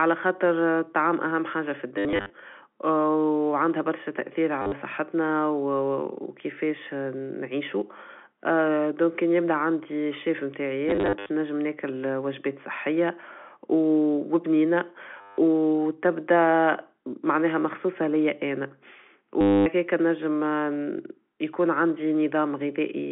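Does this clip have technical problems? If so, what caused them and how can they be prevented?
Yes. The speech stutters with a robotic, buzzy sound at 1.98–2.3 s, 4.62–4.72 s, 10.89–11.29 s, 15.21–15.37 s and 19.41–19.66 s. This is packet loss with the last packet repeated. Packets dropped out, and the receiver replayed the previous one to fill each gap. Those gaps come to about 90–250 ms per event, with runs of up to 70 ms. The replayed blocks seldom line up with the pitch. The repeat length fits 10 ms packets, giving a 100 Hz buzz beneath the telephone-band sound. Preventing it means reducing network loss, for example with QoS prioritisation and a larger jitter buffer, and using proper packet loss concealment instead of plain repetition.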